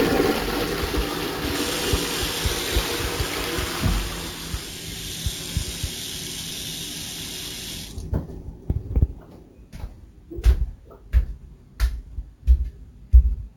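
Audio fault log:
Throughout: imaging from sample-and-hold upsampling. There's a bright, metallic fizz riding on everything, rising and falling with the level of the sound, at about 17 dB below it. The lowest mirror copy sits between 8 and 16 kHz, which fits audio that started at a 16 kHz rate and was raised to 48 kHz by holding each sample with no smoothing filter. That stepped waveform folds the spectrum back up above 8 kHz, so the fizz moves opposite to the pitch of the original.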